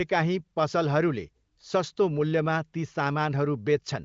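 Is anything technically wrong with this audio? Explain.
No, nothing is technically wrong with this audio.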